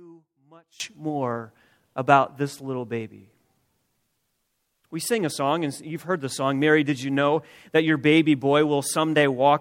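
A likely case of one channel inverted, with the polarity of one stereo side flipped before the mix to mono, affects the first 0.8 s of this speech clip. The shared content cancels, so from 0.0 to 0.8 s the sound drops by about 27 dB, leaving only the residual difference between the channels.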